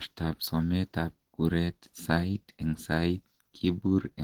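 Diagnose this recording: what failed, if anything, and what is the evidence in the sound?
The failure is at the codec stage: the speech carries plainly audible low-bitrate damage from start to finish, most likely Opus compression. The voice sounds hoarse and muffled, with a grainy, rough texture in place of clean harmonics, which points to the encoder's hybrid speech mode. Energy still extends to about 20.1 kHz, so the bandwidth was not narrowed. The bits were too few to code the detail faithfully, which fits a rate near 16 kbps.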